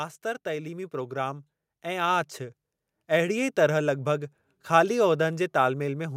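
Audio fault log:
0.22–2.37 s, automatic gain rising: the speech and the background noise swell together by about 8 dB over two seconds, settling just before "अहिड़ीअ तरह", as the gain control lifts a quiet input. A deliberate step would jump at once, and compressor pumping would follow loud peaks.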